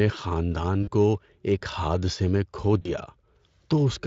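At 0.83 to 0.89 s and again at 2.81 to 2.91 s, VoIP packet loss concealed by the speech codec: about 40 ms of audio goes missing each time, and the Speex decoder stretches its last pitch and filter into a fading buzzy tone or coloured noise, seen on a spectrogram as smeared, repeated harmonics tapering into noise.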